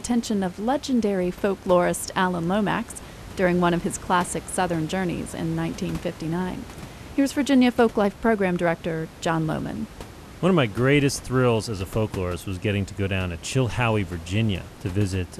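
No faults: only quiet room noise, about 18 dB below speech.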